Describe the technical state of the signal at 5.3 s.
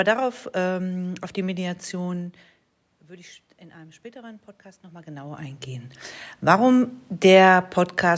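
At 5.3 s, automatic gain rising is under way, from 3.0 to 6.84 s. The input fell about 19 dB, so the gain climbs about 7 dB, swelling speech and background together.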